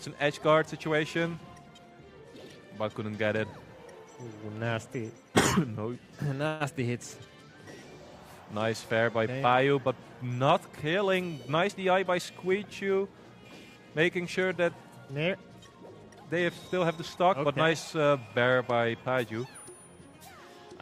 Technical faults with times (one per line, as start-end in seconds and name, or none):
6.47-6.62 call audio freeze
11.12-12.27 jitter buffer speed-up